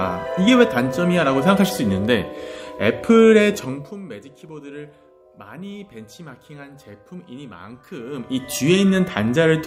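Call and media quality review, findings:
Zipper noise, 3.56 to 4.02 s: fine ticking rides on a fade down of roughly 20 dB. Gain stepped around 70 times a second, no interpolation. Waveform shows a staircase envelope; spectrogram shows evenly spaced thin vertical broadband lines.

Zipper noise, 8.0 to 8.56 s: same zipping on a rise of roughly 20 dB. Probable component: unsmoothed gain stage updating once per block. Same staircase envelope and vertical line comb as the first event.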